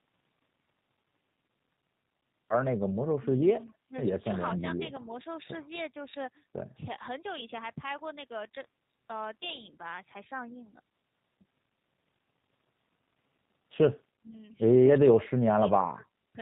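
G.729 codec damage runs throughout the speech: everything above 4 kHz is missing, and the voice sounds rough and faintly synthetic, as if rebuilt from a vocal tract model and a few pulses per frame. This plainly audible coloration fits an 8 kbit/s G.729A encoding.

Speech suppressed in double talk, at 3.65 to 3.95 s and again from 15.0 to 16.35 s: the voice suddenly sinks, by roughly 25 dB in the first dip and around 35 dB in the second, and the later one lasts about a second. The likely cause is an echo canceller that mistook the talker for returning echo and turned it down.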